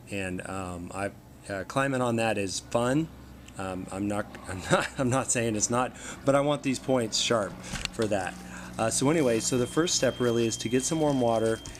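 A loudspeaker-to-microphone loop likely sitting right at the edge of feedback produces a feedback whistle from 8.92 s to the end at 11.80 s: a thin, steady 3.2 kHz tone around 20 dB below the audio, swelling and fading slowly in level without building up.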